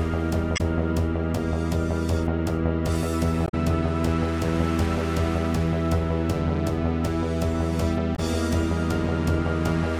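At 0.54 to 0.60 s, 3.44 to 3.54 s and 8.12 to 8.19 s there are short bursts of damaged data in the compressed stream, each lasting roughly 70 to 100 ms. Corrupted bytes in those stretches leave the decoder unable to read the frames correctly, so it loses sync and hunts for the next valid frame header. Each event comes through as a brief chirp, squawk, click or short hole cutting across the sound.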